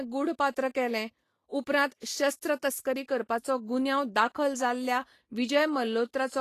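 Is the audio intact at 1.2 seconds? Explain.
No. At 1.2 seconds, as throughout the speech, the sound is hissy and grainy, most likely from Vorbis compression at a low setting, consistent with a bitrate around 35 kbps. The encoder keeps a smooth spectral outline but quantises the upper bands so coarsely that fine detail turns into noise of similar energy. On a spectrogram, the treble looks speckled and blotchy rather than finely structured, and nothing appears above 14.2 kHz, where a sharp horizontal edge marks the cut-off.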